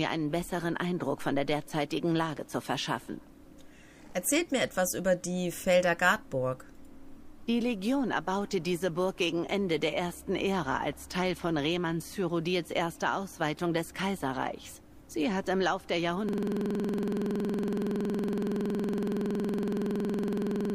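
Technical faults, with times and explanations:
16.29 s to the end: system hang loop. At 16.29 s the audio locks onto one 46.44 ms fragment and repeats it exactly until the clip ends, with no further new material. The machine or its driver stopped supplying fresh samples while the output hardware kept reading the same ring buffer over and over. The fragment length fits a 2048-sample buffer, and at a repeat rate of 21.5 Hz the loop is heard as a rapid machine-gun stutter rather than a steady tone.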